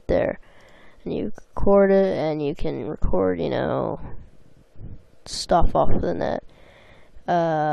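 No audible technical faults.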